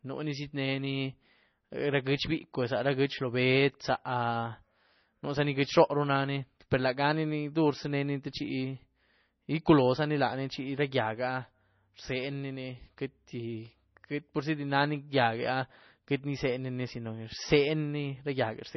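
Speech runs the full length of the clip with heavy MP3 compression damage, likely from encoding at a low bitrate that fits roughly 24 kbps. Nothing remains above about 5.9 kHz, so the top end stops abruptly. What separates this from a plain low-pass filter is the watery, swirling texture: weak frequency lines are dropped and restored from frame to frame as the encoder runs short of bits, so the sound flickers rather than merely dulling.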